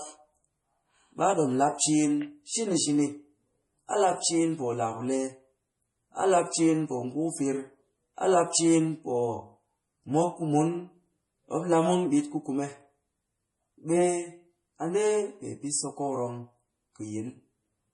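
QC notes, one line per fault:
Throughout, MP3 compression: nothing at all above 11.3 kHz, so the top end stops dead, and the speech has a watery, swirly quality with chirpy, metallic s sounds and smeared attacks. The damage is heavy, which fits a low bitrate somewhere around 32 kbps. This is likely an encoder starved of bits, lopping off the treble at a fixed point and dropping weak frequency detail that flickers in and out from frame to frame.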